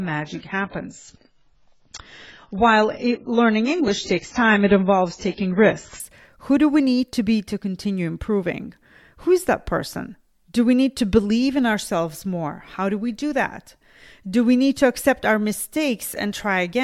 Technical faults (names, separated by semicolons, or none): adaptive stream starting at a low bitrate